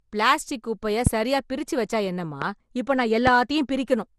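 From start to finish the speech sounds swirly, smeared and hollow. Nothing is heard above 13.7 kHz. Consonant attacks are blurred. This is generation loss, likely from lossy encoding repeated around ten times. The character fits MP2 at 96 kbit/s. Each pass quantised the audio again on a shifted frame grid. The noise and spectral holes from each pass piled up. The result is hollower than one pass at that bitrate would give.

At 1.07 to 1.09 s a single loud pop lands after "பிளாஸ்டிக் குப்பைய", peaking about 20 dB above the speech. A second pop, about 15 dB up, comes at 2.42 to 2.44 s after "சரியா பிரிச்சு வச்சா என்னம்மா". A third, also about 15 dB, hits at 3.27 to 3.30 s after "வச்சா என்னம்மா இப்போ நான்". Each is a sharp click over continuing speech. The likely cause is a sudden voltage pulse from a plug, switch, static or driver glitch.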